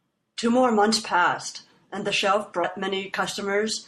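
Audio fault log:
Throughout: MP3 compression. The speech sounds watery and swirly, with smeared consonant onsets and dulled treble, plainly audible damage that points to an MP3 encode at around 64 kbps. A bit budget that tight likely forces the encoder to cut high frequencies and drop weak spectral detail frame by frame.
2.61 to 2.65 s: damaged data in a compressed stream. A brief blip of about 50 ms breaks the speech. The decoder hits corrupted frames, misreads them, loses sync and recovers only at a later frame header.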